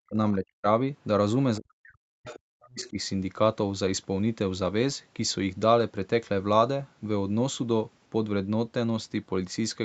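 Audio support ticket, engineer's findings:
Speech suppressed in double talk at 0.00–0.67 s and 1.58–2.97 s. Talker's level drops by up to about 40 dB, in pieces. Roughly half a second lost, then about a second. Likely cause: echo canceller ducking both sides while the far end talks.

Other side's voice leaking through at 2.27–2.40 s and 2.62–2.90 s. Short, faint second-voice scraps, about 20 to 25 dB under the talker. These fall inside the second suppression window. Likely cause: residual loudspeaker echo the canceller did not remove. The band tops out near 8 kHz, which fits a wideband Opus call path.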